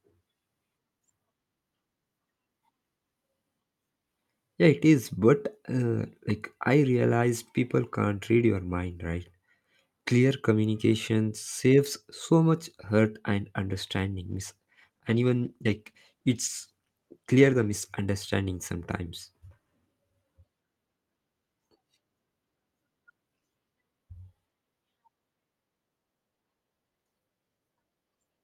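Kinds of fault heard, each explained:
Call bitrate drop: the connection's bandwidth estimate fell, so the encoder was pushed from 64 kbps down to 19 kbps for about 3.6 seconds. With that few bits the speech gets coded coarsely and loses its top end, sounding rough and muffled until the rate climbs back.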